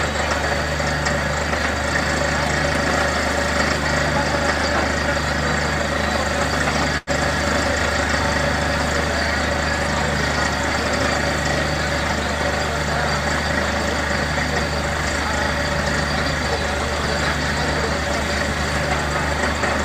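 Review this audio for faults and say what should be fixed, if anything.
At 6.97 to 7.1 s there is a short stall from a late packet. A packet missed its playout time, the jitter buffer ran dry, and the receiver held the last sound for about 96 ms before resuming where it stopped. Nothing is lost, but playback now runs 96 ms later. Prevent it with a deeper or adaptive jitter buffer and a steadier network path.

At 12.41 s a loud pop appears as two sharp clicks in quick succession, ending by 12.5 s and peaking roughly 10 dB above the surrounding audio, which continues underneath. The likely cause is a voltage transient from a plug, switch, static discharge or driver glitch. Prevent it by securing connectors, muting before switching, and checking grounding and driver stability.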